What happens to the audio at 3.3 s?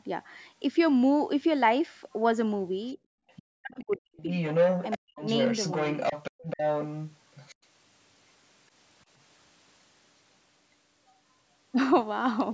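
Just after background gated by the echo canceller cut the room sound by about 35 dB from 2.98 to 3.25 s, a faint second voice, roughly 25 dB below the speech, appears from 3.28 to 3.43 s. This is likely the other side's voice leaking through because the echo canceller did not fully remove the loudspeaker signal.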